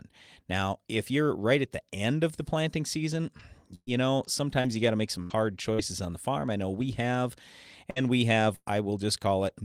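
From 3.37 to 6.82 s the speech goes choppy and robotic: repeated packet loss. Five separate gaps open within this stretch, the longest 118 ms. Each is patched by stretching the preceding sound, so about 290 ms is filled in while some 300 ms of real audio never arrives. Around a tenth of a second is rebuilt. Roughly 8 percent of the span is concealed. Unlike a single burst, the dropouts recur in quick succession, giving the stuttering texture.

At 7.90 to 7.98 s comes a burst of packet loss, one continuous hole of about 60 ms. The receiver holds the last sound for 55 ms and lets it decay, so a buzz or hiss replaces the lost audio and the speech jumps forward.

Overlapping its tail, at 7.96 to 7.98 s, and again at 8.00 to 8.02 s, just before "we have", single lost packets are rebuilt from error correction. The next packet carried a low-bitrate copy of each, so nothing is skipped. These 20 ms frames simply turn briefly rougher and noisier, which separates them from true gaps.

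After "we have", from 8.56 to 8.68 s, a second burst of packet loss removes about 100 ms. Concealment fills it with a fading continuation that ends in 40 ms of silence before the audio resumes further along.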